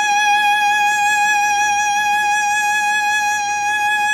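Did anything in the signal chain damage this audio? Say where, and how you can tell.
No, nothing in the chain damaged this music.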